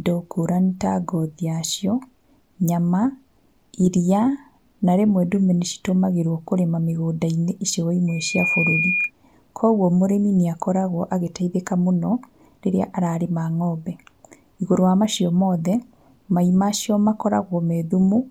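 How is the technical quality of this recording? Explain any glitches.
One clear glitch: loudspeaker feedback squeal from 8.08 to 9.11 s, just before "koguo mũrĩmi nĩ akoragwo". The mic catches its own speaker, so a 2.4 kHz tone swells in under half a second to roughly speech level.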